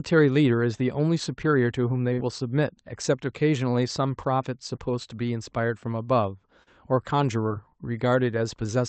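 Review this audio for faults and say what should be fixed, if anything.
Short concealed packet loss occurs three times in this speech: at 2.13–2.19 s, 4.75–4.79 s and 6.63–6.68 s. Each time, a burst of call audio, roughly 20 to 40 ms, failed to arrive in time. The decoder covered the gap by extending the preceding sound from its pitch or as shaped noise, then crossfaded back. That leaves a brief smear or wobble. The call path sounds like Opus at around 32 kbps, band-limited to about 8 kHz. Prevention: enlarge the jitter buffer or enable forward error correction so late packets are recovered.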